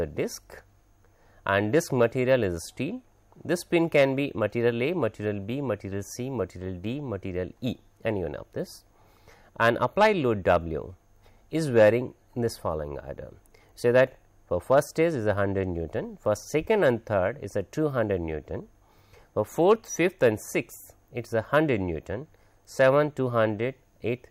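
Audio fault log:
17.56–20.68 s, resampler restarted on every block: a buzz at 50 Hz rides on the sound, consistent with a 44.1 kHz to 48 kHz conversion processed in isolated 20 ms blocks. Each block edge lacks neighbouring samples, leaving a small error that repeats at the block rate and stops when signal stops.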